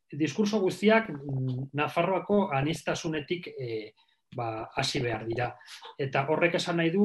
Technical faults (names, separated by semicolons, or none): DAB burbling